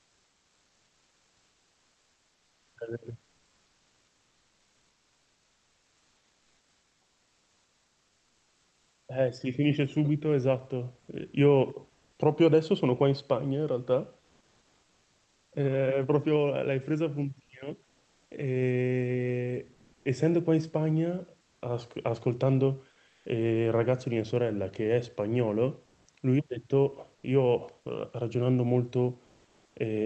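Comfort noise in place of the background fills the pauses at 3.24–9.08, 10.99–12.18, 14.20–15.52, 17.84–18.31, 19.73–20.05, 23.08–23.25, 25.85–26.07 and 29.24–29.76 s, likely from Opus DTX. The room's textured hiss gives way to a flat, featureless wash, shifting between about 1 dB quieter and about 4 dB louder. On a spectrogram it appears as a smooth, uniform band; the waveform shows a steadier floor.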